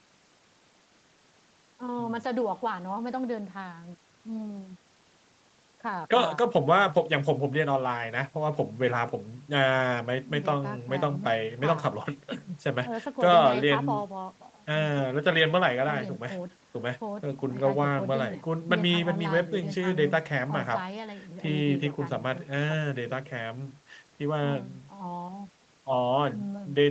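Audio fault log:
Nothing stood out on listening to the speech, which sounds as a call typically would, with nothing heard above about 8 kHz.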